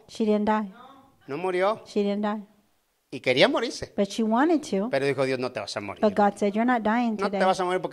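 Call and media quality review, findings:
Nothing to flag on the speech here; no audible faults in this one.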